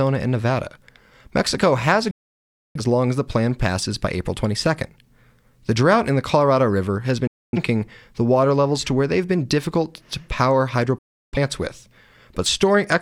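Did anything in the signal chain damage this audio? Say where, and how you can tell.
Yes. A digital broadcast dropout occurred at reception. Speech cuts to silence at 2.11 s (before "long as the plan"), 7.27 s and 10.98 s. The receiver muted corrupt frames, so that audio is lost.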